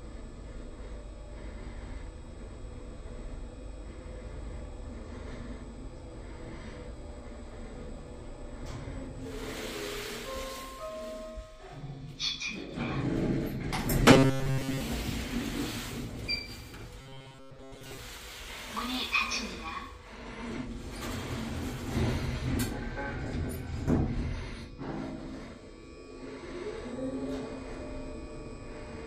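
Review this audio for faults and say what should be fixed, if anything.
Robotic sound from repeated short buffers occurs at 14.11 to 14.81 s and again at 17.01 to 17.99 s. New audio likely arrived too seldom, so playback kept looping a chunk of about 7.5 ms while most of the real material was skipped. The loop imposes a fixed 134 Hz buzz, leaving the sound rigid and metallic. To prevent it, keep data delivery ahead of playback, for example with a deeper input buffer.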